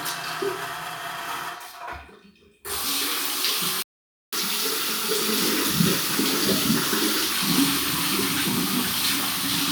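At 3.82 s the audio cuts out mid-flow and stays silent until 4.33 s, a playback stall of about 0.52 s. The likely cause is the player running short of buffered data or its output thread being blocked, so nothing reached the output during the gap.

From 4.33 s to 7.33 s the sound resumes with catch-up at higher speed: the backlog is resampled to play 1.1 times faster, lifting pitch by roughly one and a half semitones, before speed and pitch settle back to normal.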